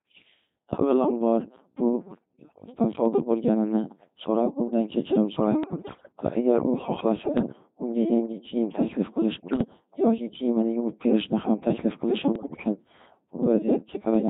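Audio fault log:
throughout: Codec 2 vocoder at 2.4 kbit/s, heavily damaged. The decoder rebuilds speech from sine waves using only pitch, voicing, energy and a spectral envelope, so the original waveform is gone. The result is a robotic, buzzy voice with a smeared, synthetic timbre.
2.04–2.68 s (ending just before "sodir bo’lganini"), 5.64–6.12 s, 7.26–7.52 s, 9.36–9.64 s, 12.36–12.64 s: bit errors on digital voice radio. Flipped bits corrupt per-frame pitch, level, voicing and spectrum, so the voice jumps and warbles into bleeps and gibberish. The error rate is likely a few percent, rising to around ten percent in the last two bursts.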